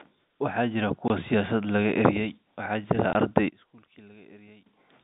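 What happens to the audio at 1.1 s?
At 1.1 s the speech ends a packet loss filled with silence that began at 1.08 s. Lost packets were replaced by 20 ms of silence, consistent with two 10 ms packets, and the speech cuts off and resumes with hard edges within the G.711 telephone band.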